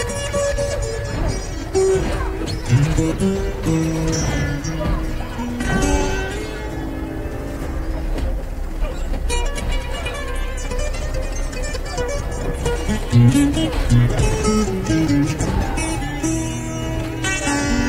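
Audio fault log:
15.07 s, audio missing between chunks: the sound skips forward abruptly, with about 20 ms gone and the two sides butted together without a gap. This likely comes from a recorder handling audio in 6-second chunks and dropping a short piece at the handover.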